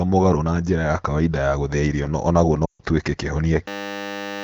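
Lost AMR speech frames, from 2.65 to 2.80 s. For about 140 ms the decoder has no valid frames, which fits a run of roughly seven 20 ms frames rejected after radio errors. It keeps rebuilding the sound from the last good pitch and vocal tract settings while lowering the gain, so the speech drops to near silence within two frames, as wideband concealment does. When clean frames return, the voice comes back briefly weak and rough.

A system hang loop runs from 3.68 s to the end of the clip. The machine or its driver has frozen while the sound hardware keeps replaying its ring buffer, so a single 10 ms slice of audio repeats about 76 times. At 100 repetitions per second this is a steady, flat buzz rather than a stutter. Roughly 0.7 s of real audio never arrives. Apart from these faults the speech has the clear sound of light AMR wideband coding.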